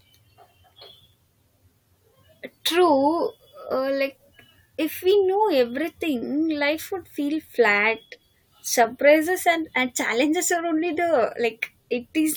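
No technical faults can be heard anywhere in the recording.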